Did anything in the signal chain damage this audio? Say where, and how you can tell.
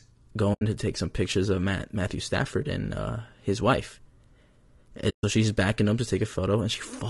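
Yes, at the codec stage throughout. The speech sounds rough and grainy across the whole clip, with noise filling the gaps between the pitch harmonics and a top band that sounds thin and synthetic. This is low-delay AAC compression, likely AAC-ELD at a low rate, consistent with about 32 kbps. Its short transform frames separate harmonics poorly and spend bits inefficiently, so at this rate the encoder cannot keep the harmonic structure clean.

There are also two soft-edged holes where the speech fades out and back in, from 0.53 to 0.62 s and from 5.09 to 5.24 s. This is AAC frame loss with muting, a network or transport fault. The decoder zeroed the spectrum of the missing frames, and the overlapping windows tapered the edges. The gaps match about 80 ms and 140 ms of lost audio, consistent with runs of four and seven 20 ms frames.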